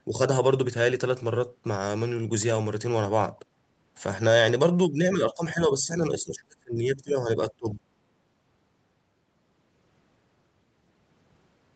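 Between 5.14 and 5.89 s, 6.09 and 7.17 s, and 7.51 and 7.82 s, the speech dips, by about 10, 30 and 25 dB. That's speech suppressed in double talk, likely the echo canceller mistaking the talker for loudspeaker echo and ducking both.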